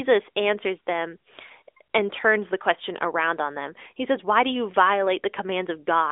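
Nothing here goes wrong at any point; the speech just comes through with the narrow, phone-call band it was carried over, and there's no fault worth flagging anywhere in it.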